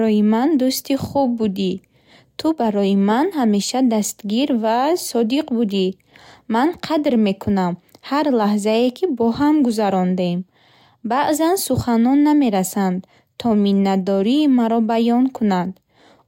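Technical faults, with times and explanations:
Nothing stood out as a technical problem on listening to this speech recording.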